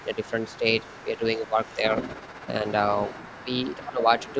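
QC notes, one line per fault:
0.0–4.35 s, other side's voice leaking through: a second, fainter voice runs under the main talker for almost the entire clip, roughly 20 dB below it. This is likely residual loudspeaker echo that the echo canceller failed to remove from the microphone signal.
0.03–0.65 s, 1.04–1.59 s, 3.45–4.38 s, speech suppressed in double talk: the talker's level drops in pieces, by about 10 dB in the first two spans and about 20 dB in the last. The affected portions grow from a fraction of a second to about half a second. The likely cause is the canceller attenuating the near talker along with the echo during overlap.
1.79–2.63 s, overlap-add ripple: the level pulses at about 15 Hz with 6 dB depth, giving a rough tremolo. This comes from frame-based resynthesis whose overlapping windows do not sum to constant gain, so loudness rises and falls once per frame.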